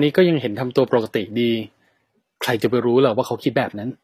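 Throughout the speech there is plainly audible damage, likely from HE-AAC compression at a rate that fits 24 kbps. Treble is rebuilt from copied lower bands, so s sounds turn gritty and metallic. A spectrogram shows repeated, blocky upper bands ending flat at 14.9 kHz.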